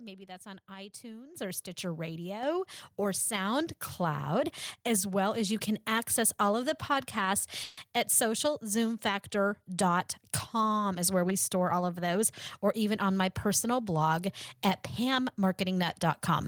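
At 1.35 s the microphone volume is stepped up by about 9 dB, and at 2.43 s it steps up again by about 5 dB. Each change is abrupt rather than ramped, so the speech and the room noise behind it jump louder together in a single instant. This is the behaviour of call software deciding the input is too quiet and raising the device's input gain in one step, twice in quick succession.

Right after "all of the podcasts", from 7.63 s to 7.89 s, the audio stalls for about a quarter of a second. The last sound is drawn out into a decaying buzz or hiss for roughly 140 ms before the speech resumes exactly where it left off, with nothing lost. This is a call audio freeze, likely caused by delayed packets draining the jitter buffer. The receiver fills the wait with synthetic continuation, so the speech arrives that much later.

After "or even on my", between 13.49 s and 13.92 s, the speech runs at about 107% speed while the pitch stays unchanged. 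It sounds slightly rushed, as though the speaker briefly hurried. This is a jitter buffer speed-up. With more audio queued than it wants, the receiver cuts out short pitch-period-length slices repeatedly, removing roughly 40 ms in total to pull the delay back down.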